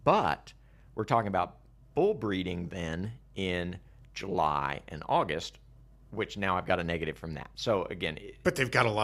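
A speech recording carries mains hum from start to finish. A steady low tone sits at 50 Hz, about 25 dB below the speech. Power-line current is leaking into the signal path, most plausibly through a ground loop or a nearby transformer.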